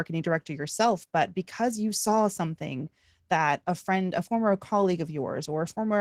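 Throughout this speech clip the voice sounds hoarse and slightly robotic. That is Opus voice compression at a low rate, which fits about 16 kbps in hybrid mode: linear-prediction coding below 8 kHz, a sparse transform layer above, and coarsely coded excitation.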